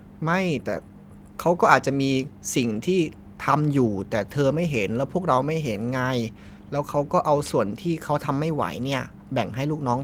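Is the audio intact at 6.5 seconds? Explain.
Yes, the audio is intact at 6.5 seconds, with no audible fault at that moment.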